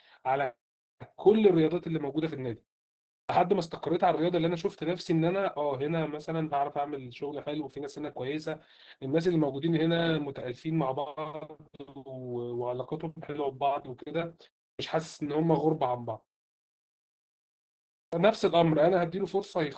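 Opus voice compression runs through the whole speech clip. The damage is heavy. Speech sounds muffled and hoarse, with a slightly robotic edge. The linear-prediction coder rebuilds each voice from a coarse model, and the excitation is coded roughly. The sound fits a bitrate near 10 kbps in the SILK voice mode. Fine detail is lost.

At 3.25 s there is a clipped start after a pause. The output device slept through the 0.68 s of silence before it. It woke too late, and about 44 ms of the onset is gone. Speech begins abruptly, missing its first sounds. The same fault returns at 14.75 s after a 0.34 s pause, losing about 43 ms. At 18.09 s, after 1.92 s of silence, about 37 ms is cut.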